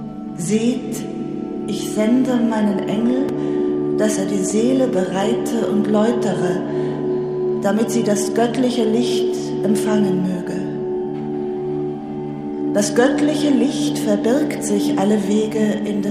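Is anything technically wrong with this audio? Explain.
Yes, there are two short blocks of digital silence, at 3.29 s and 4.51 s. In each, a run of samples drops straight to silence and comes back with no fade, so the hard edges make a tick rather than an audible hole. The first gap is about 2.9 ms, which fits a 128-sample buffer that the program didn't fill in time. The second is shorter, about 1.9 ms, and is also heard as a tick.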